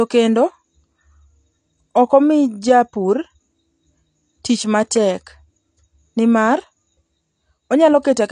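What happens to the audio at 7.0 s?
AAC compression damage runs through 7.0 s as throughout: nothing above 9.8 kHz, dull smeared speech and fizzy sibilants, likely from coarse low-bitrate AAC-LC quantisation.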